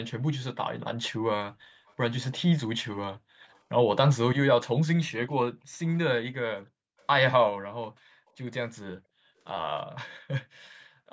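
At 1.86–1.94 s, 3.52–3.59 s and 7.02–7.07 s, a very faint, brief copy of the speech returns 331 ms late. This is most likely echo leak, where the far side's loudspeaker output got past its echo canceller. Unlike reverberation, it is a discrete delayed repeat at a fixed lag, not a smooth decaying tail.

At 3.37–3.5 s and 5.55–5.78 s, the background is gated by the echo canceller. The room sound dips by about 40 dB for roughly a tenth and then a fifth of a second, then comes back. Only the background is pushed down, so this is not a full dropout of the signal.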